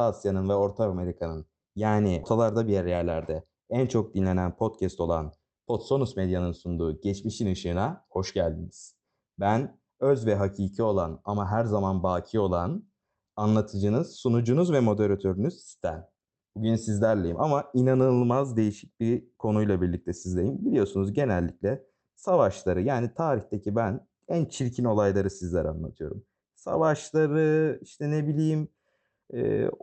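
At 2.23 s the speech has a skip ahead. About a third of a second of audio is gone. It was dropped in transit or discarded by the jitter buffer while later audio was queued. Nothing fills the hole. The two sides join almost directly, so the speech jumps forward abruptly.

From 2.32 to 3.39 s comes a jitter buffer speed-up. The buffer held more audio than it wanted. To shed the extra delay, it cut many short pitch-period pieces, removing well over a tenth of a second. Speech runs at 111% speed with unchanged pitch and sounds briefly hurried. Through all of this, the call codec's coding noise and its high-frequency cut-off at 8 kHz are present.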